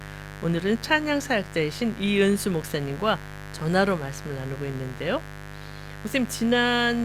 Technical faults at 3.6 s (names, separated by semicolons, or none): mains buzz